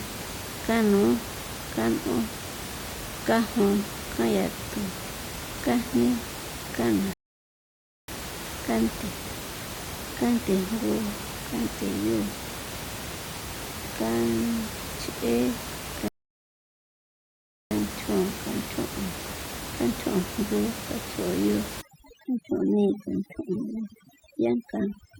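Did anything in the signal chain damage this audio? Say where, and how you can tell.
Yes. Two rebuffering stalls occur at the playback stage. The speech cuts to silence at 7.13 s and resumes at 8.08 s, then again from 16.08 to 17.71 s. It picks up exactly where it stopped, so nothing is lost. The player ran out of buffered audio, adding about 0.95 s and 1.63 s.

Overdone noise removal, a processing-stage fault, runs from 21.81 s to the end. Room noise, normally sitting about 10 dB below the speech, drops and breaks up into twinkling specks. Overly aggressive reduction is switching off frequency bands near its noise estimate, taking quiet speech detail with them.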